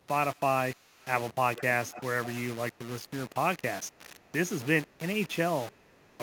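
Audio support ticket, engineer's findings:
Low bit depth without dither, whole clip. Grainy distortion tracks the speech, error roughly 15 dB below signal, quiet tails sputter. Likely capture or conversion stage rounding samples without dither; step size fits about 5-bit resolution, so error follows the waveform.

Echo leak at 0.35–0.4 s, 0.76–1.06 s, 1.56–1.63 s, 1.9–2.03 s, 5.72–6.18 s. Delayed copy trails speech by 363 ms, strongest near 1.6–2.0 s, very faint at the end. Likely far-end echo canceller letting loudspeaker pickup through.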